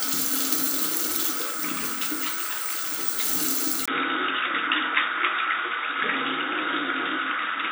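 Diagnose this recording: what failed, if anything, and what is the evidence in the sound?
At 3.86 s, after a 20 ms gap, the sound turns dull, with nothing above 3.8 kHz, and a new noise sits roughly 30 dB down. The level stays the same. This is likely an input switched to a poorer device at the driver stage. Unlike a codec bandwidth drop, it brings a gap and a different noise floor.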